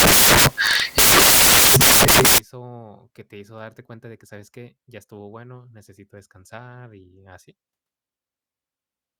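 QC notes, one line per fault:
0.00–2.38 s: samples built from the wrong bytes. Misassembled bytes promote fast-changing low bits, giving loud white noise, a dense waveform and flat broadband spectrogram.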